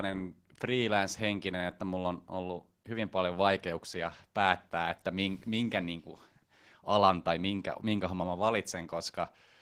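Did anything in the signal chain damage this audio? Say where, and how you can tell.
Yes, at the codec: Opus voice compression runs throughout the speech. It sounds hoarse and faintly robotic, which points to about 16 kbps in hybrid mode, with coarse linear prediction below 8 kHz and a thin transform layer above. Unlike a plain low-pass, the highs remain, but grainy.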